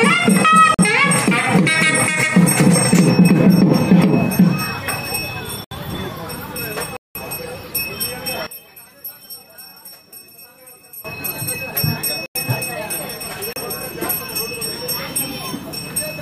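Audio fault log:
0.74 to 0.79 s, 5.64 to 5.71 s, 6.97 to 7.15 s, 12.26 to 12.35 s and 13.53 to 13.56 s, block of digital silence: the sound drops to silence for 32 to 186 ms and returns with no fade. The 46, 93 and 186 ms holes fit missed buffers of 2048, 4096 and 8192 samples. Unlike a dropout in level, nothing at all remains inside each gap.
8.47 to 11.05 s, one channel inverted: the sound falls by about 14 dB, losing its centred content, with only a faint copy left. This is likely one channel flipped in polarity, so that the shared part cancels when the channels are summed to mono. It differs from the silence blocks in lasting 2.6 s and in leaving residual sound rather than silence.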